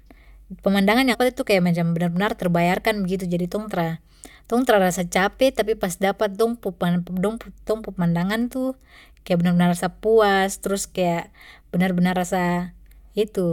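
A speech recording with one fault: damaged data in the compressed stream at 1.13 to 1.15 s. For about 22 ms the decoder hits corrupted frame data, misreads it and loses sync while it hunts for the next valid frame header, producing a brief glitch in the audio.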